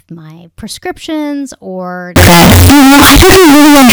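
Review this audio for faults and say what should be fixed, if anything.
From 2.16 s to the end, just after "my prescriptions or", the audio becomes a harsh, near-square blast at an almost fixed, high level. Background noise is as loud as the speech, though pitch remains traceable. This is a float read as integer fault, likely 32-bit float samples decoded as 32-bit integers. Unlike clipping, even quiet moments blast at full harshness. To prevent it, declare the sample format explicitly wherever audio is written and read.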